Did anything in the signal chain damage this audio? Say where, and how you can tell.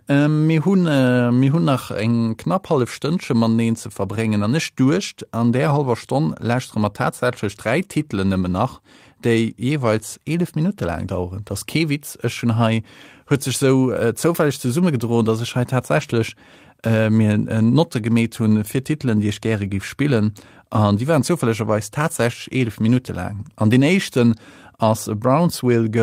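Yes. At the network stage, speech from 15.97 to 16.03 s shows a lost packet rebuilt from error correction: two packets went missing, and the decoder filled about 40 ms from the low-bitrate redundant copies carried in the following packets. There is no dropout or silence, which is the giveaway, but that short stretch turns rougher and noisier than the audio around it, the texture of a coarse backup encoding briefly standing in for the full-quality stream.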